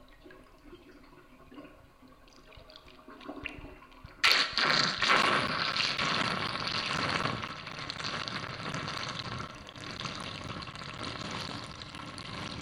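From 5.22 s to 12.49 s, periodic USB or driver dropouts cut around 10 ms of sound every 0.25 s, about thirty in all, as a stalled driver drops samples. Each gap is filled with silence and heard as a regular tick. On a waveform these appear as flat notches, and on a spectrogram as thin vertical gaps.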